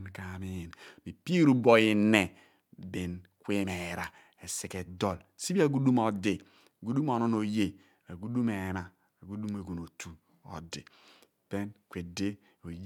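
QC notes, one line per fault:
No faults found on listening.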